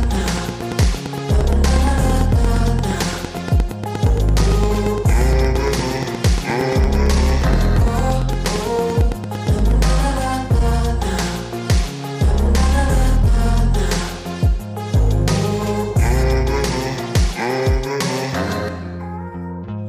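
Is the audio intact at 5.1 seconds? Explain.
No, 5.1 s falls inside a train of clicks running from 0.03 to 9.83 s. It's a regular tick at 8.68 per second, likely interference or a faulty connection or power supply.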